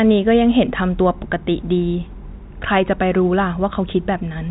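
Nothing stood out on listening to this speech, which carries the narrow band of an ordinary telephone line with nothing above about 3.8 kHz.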